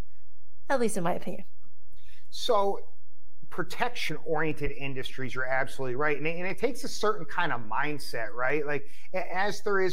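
A speech recording with two technical problems. The first is a DC offset present for the whole clip: every sample sits shifted by a constant amount, so on a waveform display the trace rides above or below the centre line instead of straddling it, leaving less headroom on one side before clipping. The offset itself isn't audible, but a spectrogram shows it as a steady band of energy pinned at the very bottom, at 0 Hz, running unbroken from start to finish. The second is periodic USB or driver dropouts, arriving once every 1.0 s from 0.50 s to 9.50 s, about ten in all. At each one, something blocking the audio path at a fixed interval causes a tiny sliver of audio, well under a millisecond, to be skipped rather than filled with silence. The splice leaves a small discontinuity that is heard as a regular tick while speech is present. On the waveform each shows as a sudden step where the trace jumps, and on the spectrogram as a thin vertical broadband line repeating at even one-second spacing.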